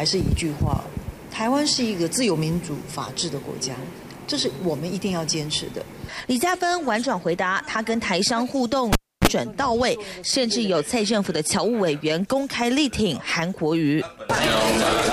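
A cable pulled and plugged in occurs from 8.93 to 9.28 s: a pop as the live lead comes out, about 0.3 s of near silence, a 32 ms burst of 60 Hz mains buzz while only the plug tip makes contact, then another pop as the sound returns.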